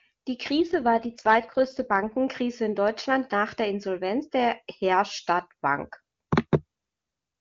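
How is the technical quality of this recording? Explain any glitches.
There is one glitch, heard against AMR wideband (HD Voice) coding that is clear at its normal rate. AMR rate drop, 0.56 to 2.18 s: the network switched the codec to a lower rate, fitting a fall from 23.85 to 8.85 kbit/s, with bits shifted to error protection. The speech turns rougher and more synthetic, with no gap and no loss of bandwidth.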